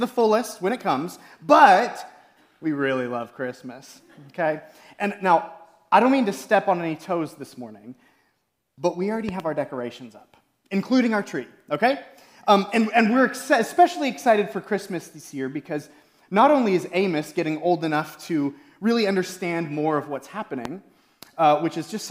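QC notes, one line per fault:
9.29–9.42 s, loud pop: two sharp pops in quick succession, peaking a few dB above the sound, which carries on underneath. A sudden voltage pulse, likely from a plug, switch or static, was added to the signal.
20.65–20.68 s, loud pop: a single brief, louder pop, around 10 dB above the surrounding sound, which continues beneath it. This is likely a voltage step from a switch, plug or driver glitch, shaped by the circuits that follow.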